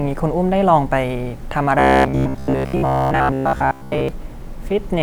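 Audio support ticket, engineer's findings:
Robotic sound from repeated short buffers, 1.79 to 4.09 s. Speech collapses into a rigid metallic buzz at 66.7 Hz, most of the span repeated. Likely buffer underrun: playback re-looping the last block, which fits a 15 ms buffer, while fresh audio is skipped.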